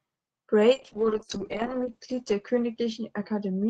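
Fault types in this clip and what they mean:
call bitrate drop: from 0.79 s, coarser coding leaves speech rough and muffled; the spectrogram's edge drops to 8 kHz, pointing to roughly 8 kbps.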